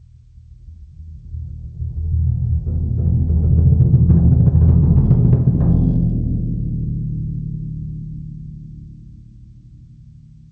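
The clip is music, heard through a call path that leaves nothing above 8 kHz. Gain pumping runs throughout. The level swells between loud moments and ducks by around 5 dB under each one. The likely cause is a microphone gain set far too high, with a fast limiter clamping down on every peak.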